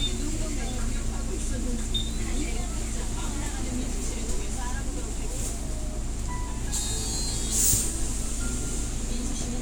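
From 1.09 to 9.23 s, a click recurs about every 1.02 s, roughly ten in all, heard as clock drift buffer slips. Two clocks disagreeing by something like 700 ppm likely force a few tens of samples to drop or repeat. Each slip shows as a waveform discontinuity and a thin vertical broadband line on a spectrogram.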